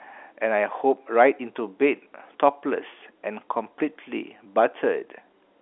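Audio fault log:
No faults found: the speech arrives through G.711 telephone coding working as intended, with a line band of roughly 300 Hz to 3.5 kHz, nothing above 3.8 kHz, and at most a faint trace of quantisation noise.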